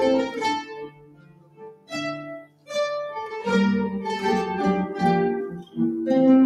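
A speech-oriented noise suppressor applied to music or sounds runs through the whole clip. It treats steady, sustained content as noise and pulls it down, with gain swinging by roughly 20 dB, so held sounds and tails pump and thin while attacks pass through.

Sound cut by the noise suppressor is clearest from 0.62 to 1.92 s, where sustained material sinks by about 20 dB. Shorter dips follow at 2.39 to 2.70 s, about 19 dB down, and at 5.50 to 5.78 s, about 16 dB down.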